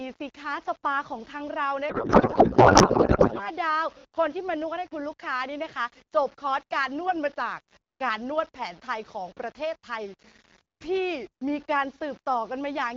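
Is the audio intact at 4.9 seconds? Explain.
No. At 4.9 s, as across the whole clip, you get low bit depth without dither: samples rounded to about 7 bits, likely, with error that tracks the signal, so quiet speech turns grainy, with the grit sitting only around 25 dB under the level.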